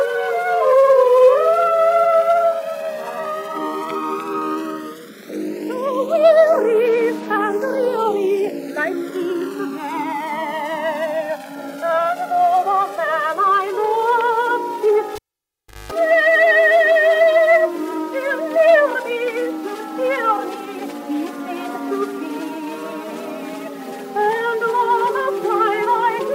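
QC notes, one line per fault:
Throughout: channels drifting apart. The two channels run on separate clocks that disagree by a few hundred parts per million. The delay between them therefore grows steadily, reaching about 5 ms by the end. Summed to mono, the two copies cancel at evenly spaced frequencies. Those comb notches slide slowly down through the spectrum as the delay grows. The result is a gradual, sweeping flange that keeps changing across the clip.
15.15–15.92 s: cable pulled and plugged in. A live cable comes out with a sharp pop. The sound then drops to near silence for about 0.72 s. As the plug goes back, only the tip touches at first. That leaves the input open to hum, so a 50 Hz mains buzz bursts through for about 0.21 s. A second pop follows when the contact seats fully and the sound returns.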